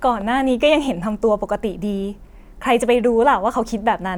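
No technical faults can be heard in this recording.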